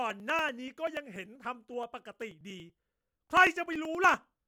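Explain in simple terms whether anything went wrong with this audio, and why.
Periodic USB or driver dropouts: the audio connection stalled every 0.096 s, skipping about 4 ms each time, so the speech ticks steadily from 0.10 to 4.43 s.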